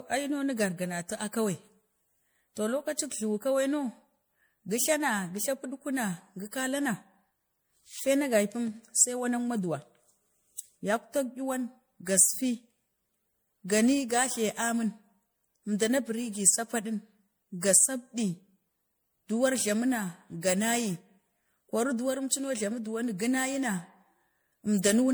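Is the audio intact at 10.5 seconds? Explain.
No. At 10.5 seconds the speech carries generation loss, as it does throughout. It sounds swirly, smeared and hollow, with blurred attacks. It was likely re-encoded about five times, through an MP3 codec near 96 kbit/s. Each pass quantised on a shifted frame grid, stacking noise and spectral holes.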